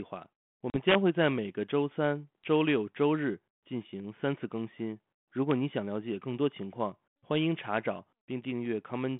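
Packet loss on the ADPCM call at 0.70 to 0.76 s leaves a hard-edged hole of about 40 ms, roughly two packets. The decoder's adaptive predictor and step size lose step with the sender's, so the returning speech is briefly disturbed before it settles.

Integer overflow from 0.89 to 1.26 s, with peaks driven about 2 dB past the limit, wraps each one to the opposite sign and produces violent cracks far sharper than clipping. The same overflow recurs as a single crack at 5.51 s, where the level only just reaches the limit. Both faults sit within the G.726 telephone band at 32 kbit/s.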